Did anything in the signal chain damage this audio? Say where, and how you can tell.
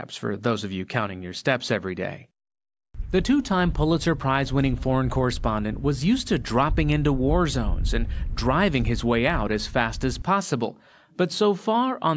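No, nothing in the chain audibly damaged this audio; no stage left a mark.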